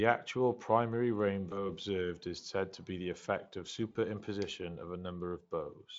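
At 1.49 s, right after "actual primary", the voice smears into a brief buzzy, stretched tone that fades and stays weak until about 1.67 s, just before "observed is said to". A similar, shorter smear comes at 3.91 to 3.97 s, after "be the effect of". Both are VoIP packet loss concealed by the speech codec. The Speex decoder filled missing audio, about 20 ms and then 40 ms, by extending its last pitch and filter while lowering the gain.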